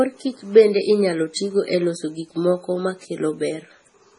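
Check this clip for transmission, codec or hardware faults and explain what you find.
Two codec faults are audible in this speech clip.

Throughout, the speech sounds heavily watery and swirly with no content above 10.5 kHz, likely from MP3 compression at a very low bitrate, around 24 kbps.

From 1.34 to 1.36 s, between "bende inyalo" and "tigo e loso gik", there is pre-echo: about 20 ms of hiss comes before an attack, because block-spread quantisation noise fills the quiet gap ahead of it, softening the onset.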